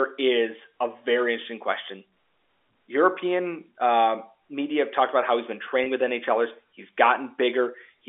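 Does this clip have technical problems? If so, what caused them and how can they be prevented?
Yes. Just after "about how he's been", at 5.84 to 5.86 s, the sound briefly holds and turns slightly buzzy, a short frozen stretch rather than a gap. This is packet loss with pitch repetition: about 20 ms of audio never arrived, which fits a single lost packet, and the receiver bridged the hole by repeating the last pitch period. Because the loss was so short, the patch stays a held buzz instead of fading to silence, heard here through the narrow 300 to 3500 Hz band of the G.711 telephone line. Prevent it with a steadier, less congested network path, forward error correction, or a jitter buffer deep enough to wait out late packets.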